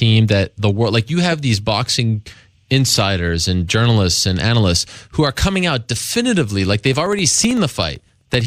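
A speech recording with periodic USB or driver dropouts from 6.74 s to 8.41 s: about every 64 ms, roughly a millisecond of signal drops to silence, giving regular ticks. The waveform shows evenly spaced gaps; the spectrogram shows thin broadband vertical lines.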